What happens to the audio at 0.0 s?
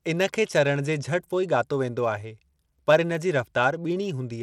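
Right from 0.0 s, and for the whole clip, the speech carries plainly audible damage that is most likely Bluetooth SBC compression. SBC splits the signal into a handful of wide sub-bands and hands out bits with no real model of hearing, so with a tight bit pool the upper bands are starved and everything is coarsely quantised. You hear treble that flickers and a gritty, aliased edge on the sound, which fits a stream around 96 kbps.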